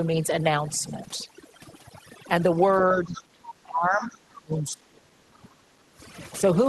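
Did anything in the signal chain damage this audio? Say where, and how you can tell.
Yes. Overdone noise removal, in the call processing stage, runs through the whole clip. The background drops and breaks up into twinkling specks. The suppressor is pulling individual frequency bands down whenever they approach its noise estimate, and quieter speech components go with them.

Speech suppressed in double talk appears at 2.94–3.40 s, 3.63–5.52 s and 5.86–5.90 s. The talker's level dips by roughly 15 dB in the first and last, and by around 25 dB in the long middle stretch. The likely cause is the echo canceller failing to separate local speech from loudspeaker echo and attenuating both.

Other side's voice leaking through, also in call processing, shows up at 3.13–3.23 s and 3.90–4.17 s. A faint second voice sits roughly 20 dB under the talker. This is likely residual loudspeaker echo that the echo canceller did not fully remove from the microphone signal.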